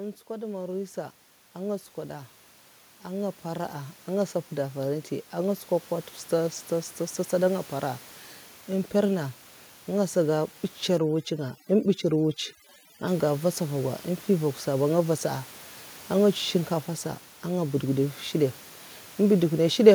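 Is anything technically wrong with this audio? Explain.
Yes. From 0.27 s to 6.6 s there is automatic gain rising. The gain control judged the input too quiet and gradually raised its gain by about 14 dB. The room noise, about 23 dB below the speech, swells along with the voice, which shows the change is in the gain rather than a speaker moving closer to the microphone.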